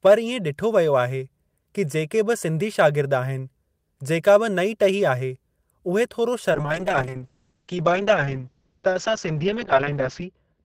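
At 6.52 s a call bitrate drop begins and holds to the end. The encoder falls from 32 to 7 kbps, codes coarsely and narrows bandwidth from 20 kHz to 8 kHz. The speech turns rough and muffled, and a spectrogram shows everything above 8 kHz abruptly vanishing.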